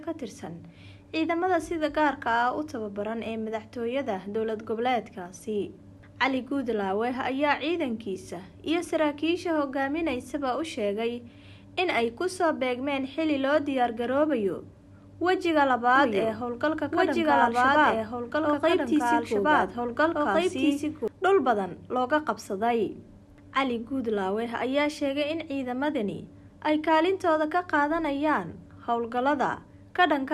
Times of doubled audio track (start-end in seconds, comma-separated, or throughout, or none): 15.96-21.08